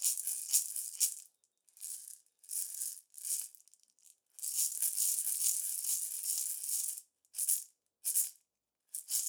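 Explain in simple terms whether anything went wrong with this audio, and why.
Nothing went wrong with this audio: the signal stays intact, with no technical faults anywhere in the recording.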